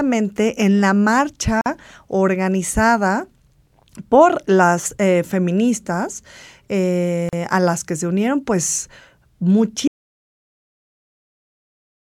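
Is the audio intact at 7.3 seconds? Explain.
No. A gap at a join of encoded pieces opens from 7.29 to 7.33 s, a silence of about 38 ms. Separately encoded pieces were joined untrimmed, leaving encoder delay and padding. The speech drops out abruptly, with smeared edges, then resumes with "a las que se".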